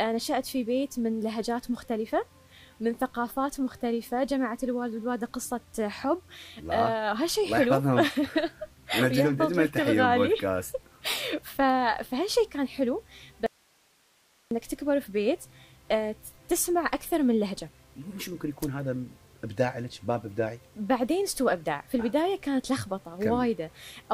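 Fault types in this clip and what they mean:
Audio dropout to a faint residue: the sound cuts out abruptly from 13.46 to 14.51 s, leaving just hiss well below the signal, likely a brief signal loss with the path still live.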